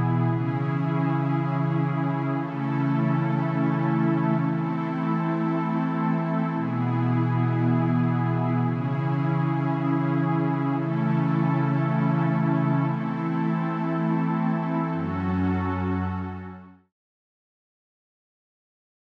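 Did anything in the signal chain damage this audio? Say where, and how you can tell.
No, nothing in the signal chain stood out on listening, and the smooth fade-out that begins at around 15.5 s and reaches silence at 16.93 s is an ordinary editing choice rather than damage.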